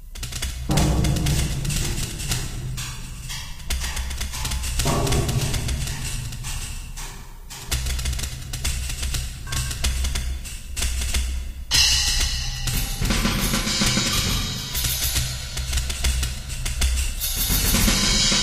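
No technical faults are audible.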